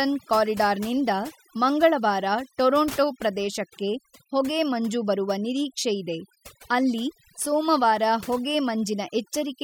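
Overdone noise removal runs through the whole speech clip. A noise reduction stage set too strong cuts frequency bands close to its noise estimate. Quiet parts of the voice vanish with them. Pauses fall to near silence with twinkling specks.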